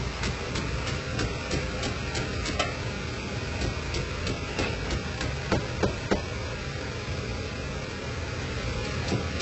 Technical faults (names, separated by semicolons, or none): HE-AAC compression